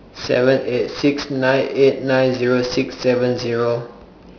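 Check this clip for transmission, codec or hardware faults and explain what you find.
One fault runs through the whole speech clip: aliasing. Unfiltered resampling from 16 kHz to 11 kHz mirrors energy above 5.5 kHz downward, about 15 dB below the speech. Sibilants sound gritty, and a spectrogram shows folded streaks running hard to the 5.5 kHz edge.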